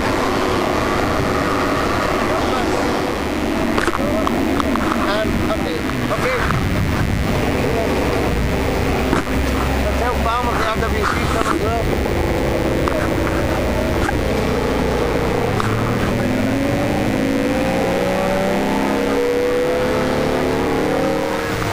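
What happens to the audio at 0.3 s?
At 0.3 s a mains buzz sits under the sound, as it does across the whole clip. It is a steady, raspy buzz. It comes from sharp switching spikes, such as from a dimmer, a rectifier or a missing shield, leaking in twice per cycle of the 50 Hz supply. Those spikes spread energy across harmonics of 50 Hz, reaching up to several kHz. The buzz is fairly prominent, not far below the wanted sound.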